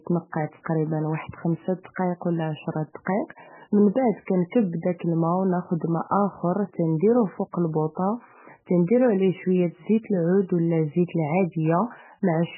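From the start to the end of the speech, nothing is heard above 3 kHz, and the sound is watery and swirling, with chirpy, metallic sibilants and blurred onsets. This points to heavy damage from likely MP3 compression at a very low bitrate, around 8 kbps, where the encoder drops the treble and switches weak frequency lines on and off between frames.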